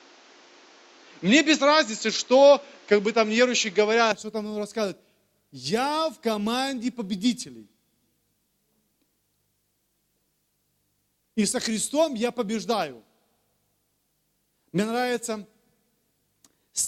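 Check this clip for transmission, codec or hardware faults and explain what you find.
One fault, from 0.0 to 4.1 s: the input was likely switched to a poorer device that passes nothing above 7.6 kHz. The sound is dull, a few decibels off in level and carries extra background noise, then clears with no gap at the switch.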